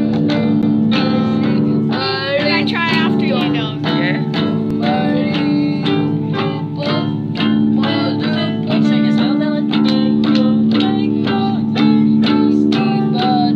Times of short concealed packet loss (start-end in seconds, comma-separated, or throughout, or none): none